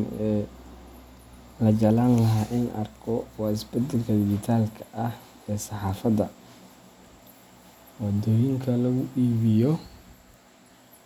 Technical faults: none

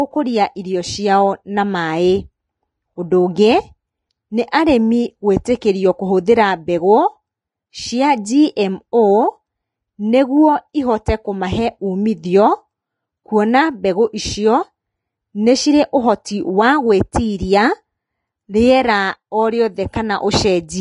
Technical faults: Vorbis compression

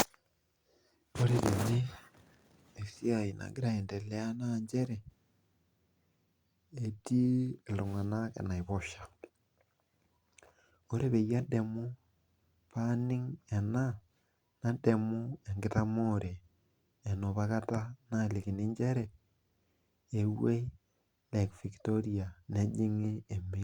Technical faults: none

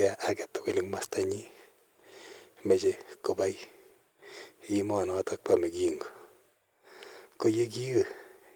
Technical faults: none

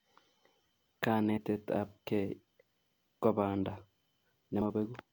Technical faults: compressed frames skipped

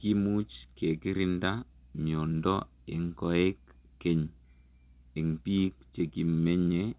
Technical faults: none

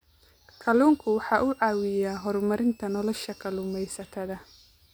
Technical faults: switching supply whistle

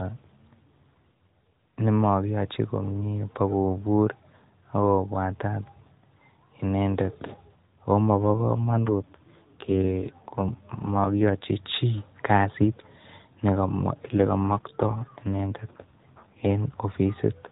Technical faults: AMR rate drop

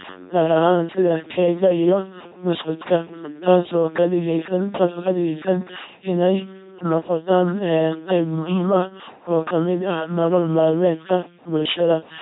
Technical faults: LPC-10 vocoder; electrical switching spike

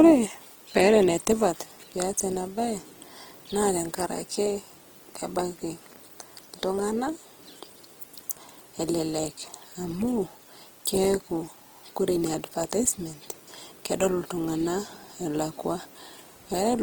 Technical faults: Opus compression

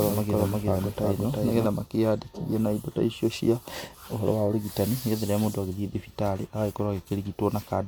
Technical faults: doubled audio track

